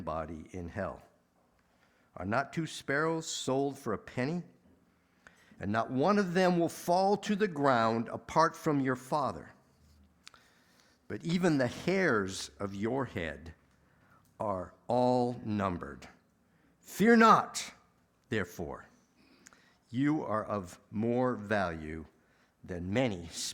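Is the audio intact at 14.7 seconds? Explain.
Yes, the audio at 14.7 seconds is intact, with no dropout, click, distortion or other fault at that moment.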